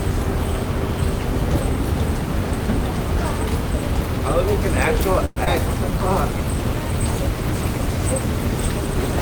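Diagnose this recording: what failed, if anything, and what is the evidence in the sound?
Network delivery stalled at the receiving end of the call, likely because packets were held up and the jitter buffer ran dry. From 5.25 to 5.38 s the last sound is stretched into a fading fill lasting about 110 ms, with a brief dip to near silence. Playback then resumes where it stopped, losing nothing but arriving about 110 ms later.

A short concealed packet loss follows at 5.44 to 5.48 s. About 60 ms of audio never reached the decoder in time. The receiver covered the gap with a roughly 20 ms synthetic continuation before blending back, so the sound briefly smears or wobbles, and the delay shrinks by around 40 ms.

A jitter buffer slow-down runs from 5.91 to 6.46 s. To rebuild its reserve, the receiver repeated tiny stretches of waveform, playing at 92% speed without changing pitch. Over about half a second this adds 50 ms, so the sound is audibly drawn out.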